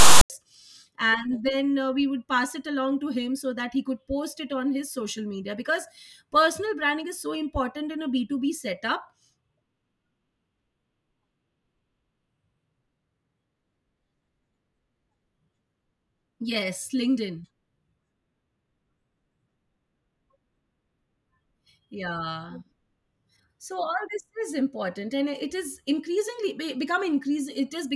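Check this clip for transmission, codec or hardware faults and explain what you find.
One fault is present, at the very start of the speech. From 0.00 to 0.30 s, file tags are played as audio: text metadata is decoded as samples, giving a harsh, lopsided rasp with hard edges, then silence where zero padding follows. Unlike a random codec noise burst, it sits exactly at the file's start and ends abruptly.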